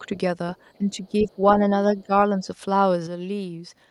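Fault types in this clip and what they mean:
Speech suppressed in double talk: at 0.0–0.09, 0.78–1.39, 1.92–2.12 and 2.39–2.47 s the speech dips by roughly 5 to 15 dB, likely an echo canceller ducking both talkers at once.
One channel drops out: from 3.07 s to the end the level falls abruptly by about 6 dB, likely because one stereo channel was lost before the mono sum.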